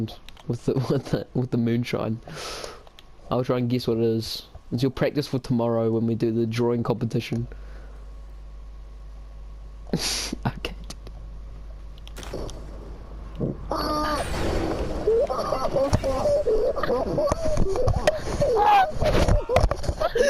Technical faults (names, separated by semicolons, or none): mains hum